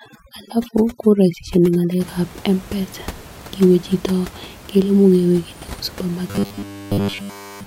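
From 0.0 to 2.0 s the speech shows overdone noise removal: the suppressor pulls individual frequency bands down whenever they sit near its noise estimate, taking quiet speech detail with them. The background drops and breaks up into twinkling specks.

From 6.28 s to the end at 7.66 s the speech becomes a rigid metallic buzz at 100 Hz that loosely tracks the syllables. This is robotic sound from repeated short buffers, likely from audio arriving too seldom, so that all of this stretch is a 10 ms segment replayed instead of new audio. The room noise, about 20 dB below the speech, is part of the recording.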